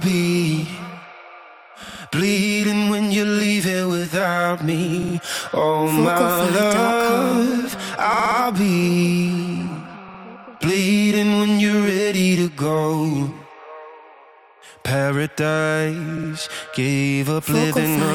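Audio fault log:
1.82–2.01 s, 5.02–5.14 s, 8.13–8.37 s, 10.08–10.20 s, 16.17–16.29 s: repeated frames. Each time, a 60 ms stretch of sound plays again, two to four extra times, which fits a small run of compressed frames being sent twice or more. This adds between 120 and 240 ms. The result is a rhythmic stutter. Unlike a dropout, nothing goes missing, and the same fragment loops.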